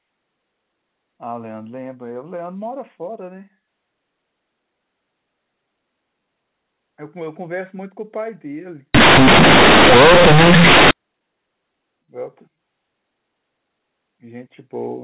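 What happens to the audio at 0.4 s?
Nothing goes wrong at 0.4 s: the speech there carries on intact, with only the narrow, telephone-like band of its A-law G.711 coding, which sounds as it should.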